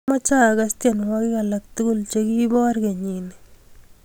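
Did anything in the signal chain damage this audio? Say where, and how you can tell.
No, nothing along the way seems to have harmed this speech recording, and there's no point in it where the signal chain gives itself away.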